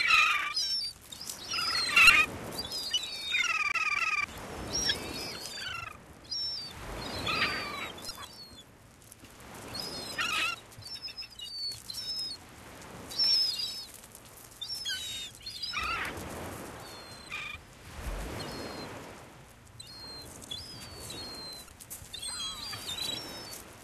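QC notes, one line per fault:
2.07–2.10 s, 8.07–8.11 s and 21.66–21.69 s, damaged data in a compressed stream: part of the encoded stream arrives corrupted, so the decoder cannot parse the affected frames, loses sync and hunts for the next valid frame header before it resumes. Each time, the sound breaks for roughly 30 ms.
3.72–4.24 s, CD stuck on one turn: a scratch keeps throwing the laser back to the same spot on each revolution, so the same 262 ms slice of audio plays twice in a row, with a short mute at every jump. The result is a quick, evenly spaced stutter of roughly half a second before playback moves on.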